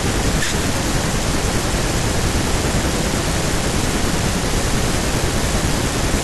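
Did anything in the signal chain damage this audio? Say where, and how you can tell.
Yes. The damage is at the driver or buffer stage, throughout the clip. A steady buzz near 46.9 Hz sits under the speech. That is a block size mismatch (truncated), fitting 1024-sample blocks whose tails are discarded. Pace and pitch stay normal.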